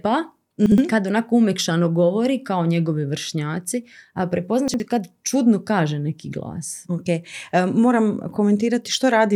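A speech recording with two brief jumbled moments: one from 0.66 to 0.78 s, just before "kad onako umekšano govori", and another from 4.68 to 4.8 s, right after "kao njegovi vršnjaci a". Both are chunks out of order. In each spot a 60 ms piece of audio plays one chunk late, after the piece that should follow it. Nothing is missing, but the swap scrambles the sound and leaves three hard joins.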